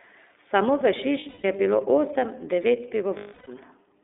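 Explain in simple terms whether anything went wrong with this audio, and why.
Yes, two things went wrong. The whole recording has gone through the iLBC codec, a phone-call voice codec. Everything above about 3.6 kHz and below about 300 Hz is gone, so the speech sounds thin and boxy, like an old phone line. On top of that the coding damage is easy to hear: the voice comes across a bit rough and synthetic, because the codec rebuilds it from a simplified model in short chunks instead of keeping the real waveform.

Then there are lost iLBC frames, which means bits of the call simply didn't arrive. The first spot is from 1.19 to 1.45 s, with gaps scattered across about a quarter of a second. The longest stretch is around 150 ms, and the way the damage falls into chunks fits the codec's 30 ms frames. The second spot runs from 3.17 to 3.49 s, right after "bilo osem devet", and it's a solid 300 ms hole. 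In both places the decoder papers over the missing audio by repeating the last bit of voice with some noise mixed in, so you hear a held, buzzy, slightly breathy vowel where the real speech should be. The longer gap at 3.17 s fades as it goes on. Since each frame stands on its own, the voice comes back right almost straight away.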